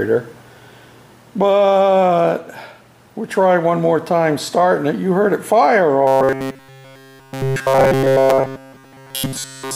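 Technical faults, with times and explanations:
6.07 to 9.75 s, robotic sound from repeated short buffers: a rigid 134 Hz metallic buzz overtakes nearly all the sound, likely from a 7.5 ms chunk looping while fresh audio was skipped.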